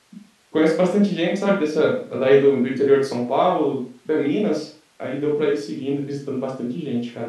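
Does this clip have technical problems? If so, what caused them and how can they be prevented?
No, the speech signal shows no audible technical faults at any point, so nothing needs preventing.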